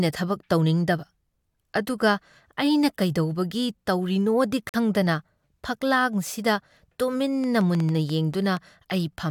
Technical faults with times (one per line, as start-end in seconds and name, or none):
4.69-4.76 corrupt frame muted
7.44-8.58 train of clicks